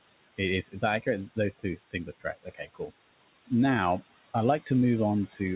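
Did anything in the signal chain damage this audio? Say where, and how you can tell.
Yes. The damage is in the call-processing stage, where the noise suppressor works on the room noise, which sits about 16 dB below the speech. Between phrases that noise is pulled down by about 17 dB and swells back under each phrase. On a spectrogram the noise floor shows as blotchy, flickering patches that vanish in gaps and return under voiced energy. These are noise suppressor artifacts: per-band gains switching frame by frame.

The same suppressor also causes speech cut by the noise suppressor, at 0.62–0.83 s, 1.36–1.65 s, 1.9–2.26 s and 2.43–2.91 s. Within each span, roughly a tenth to a fifth of a second of quiet speech is turned down with the noise, by about 12, 14, 17 and 18 dB. The dips deepen across the clip. The waveform shows the envelope collapsing mid-phrase, and the spectrogram shows weak consonant and tail energy blanked. 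The spectrum stops at 4 kHz, which fits a telephone-rate codec.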